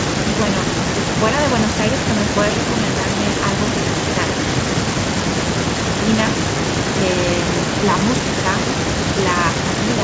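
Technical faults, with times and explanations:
No technical faults are present in this speech clip.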